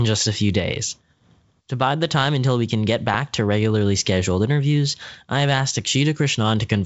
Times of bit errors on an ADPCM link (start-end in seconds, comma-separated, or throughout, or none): 3.06-3.16